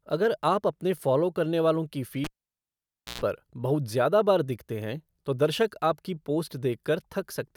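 A pop at 2.24 s cuts this speech clip to near silence, with the cable out for about 0.92 s, during which a short burst of 60 Hz mains buzz lasting about 0.12 s is heard, and a second pop brings it back by 3.21 s. The cable was pulled and plugged in while live, the buzz coming as only the plug tip made contact.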